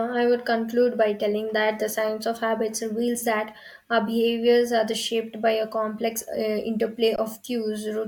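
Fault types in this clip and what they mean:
Underrun with held sample: the output buffer emptied at 7.16 s and the converter held one value for 20 ms, flattening the speech until it resumes softly where it stopped.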